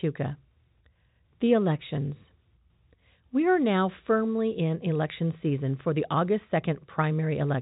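No faults can be heard anywhere in this speech recording.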